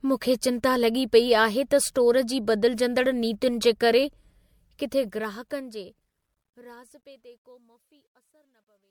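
Throughout, the speech sounds swirly, hollow and smeared, with blurred consonant attacks. This is generation loss, likely from about five re-encodes that fit 96 kbit/s MP3; a spectrogram shows scattered holes and a ceiling near 20.1 kHz.

From 4.59 s to the end, truncation distortion on a fade appears. The level falls without dither, which fits a 12-bit stage. From 7.19 s to 8.91 s the tail turns gritty, and the waveform shows coarse square steps.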